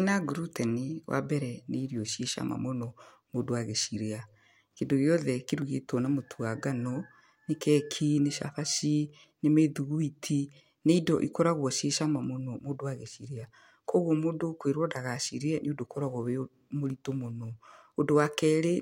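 At 5.62 s, just before "na mũtu wa", there is a block of digital silence lasting about 0.73 ms, consistent with roughly 32 samples being silenced. The output buffer was likely not filled in time, so the speech waveform drops straight to silence and returns without any fade. Because the hole is so short, it is not heard as a gap. The two hard edges merge into a single sharp tick in the speech.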